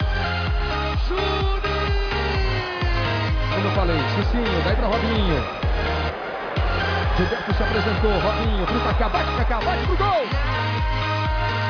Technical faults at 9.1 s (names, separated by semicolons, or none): none